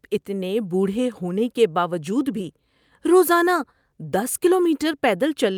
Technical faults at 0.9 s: none

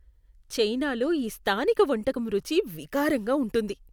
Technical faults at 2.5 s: none

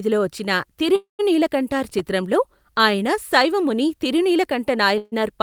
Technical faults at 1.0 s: call audio freeze

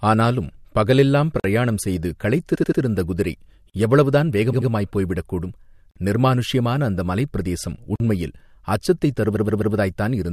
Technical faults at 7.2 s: none

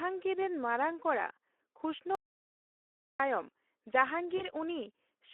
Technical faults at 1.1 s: Speex codec

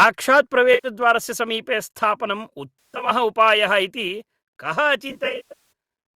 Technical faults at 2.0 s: none

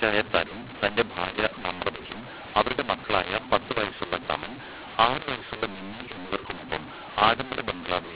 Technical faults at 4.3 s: mu-law and A-law mixed up

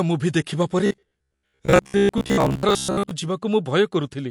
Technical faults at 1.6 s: MP3 compression; robotic sound from repeated short buffers

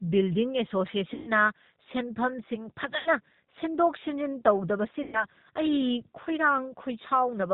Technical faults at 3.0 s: G.729 codec; VoIP packet loss concealed by the speech codec

